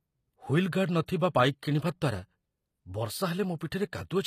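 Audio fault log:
Throughout: HE-AAC compression, likely. Codec damage is plainly audible. The treble is rebuilt from copied lower bands, so its harmonics do not line up with the original. Nothing remains above 14.9 kHz. The sound fits a low bitrate around 24 kbps.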